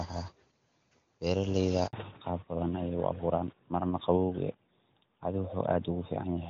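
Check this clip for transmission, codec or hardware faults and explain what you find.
Two faults are audible, both at the same moment about 1.9 s into this speech clip.

At 1.87 s the speech drops out abruptly and stays silent until 1.93 s, a hole of 60 ms. This is a handover gap. The phone was switching the call between networks, and no speech frames reached the receiver while the old link closed and the new one came up. Whatever was said in those 60 ms is simply gone, so the speech resumes with a break in its flow.

From 1.93 s to the end, the speech sounds noticeably duller and more boxy, with its crisp upper detail missing. This is a fallback to narrowband. Before the gap, the speech carries the fuller, clearer sound of the AMR wideband (HD Voice) codec, which is consistent with its highest rate and shows little or no codec damage. After the handover, the call continued on the older narrowband AMR codec. 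Nothing above 4 kHz survives, so sibilants lose their edge and the airy brightness of the speech vanishes, and it takes on the flatter quality of a traditional phone call.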